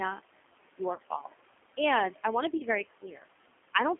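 Throughout the speech, G.729 coding confines the sound to roughly 250 Hz to 3.4 kHz and adds a rough, synthetic edge. Unlike simple band-limiting, it carries a buzzy, model-built quality. A noise suppressor also runs the whole time, pulling the room noise down by about 17 dB between phrases and letting it swell back under speech. At 0.94–0.99 s and again at 2.57–2.63 s, VoIP packet loss concealed by the speech codec leaves gaps of 40 ms and 30 ms, consistent with several lost 10 ms frames. These are filled with a stretched, fading buzz or coloured noise, and the speech stays weak briefly afterward instead of cutting to silence.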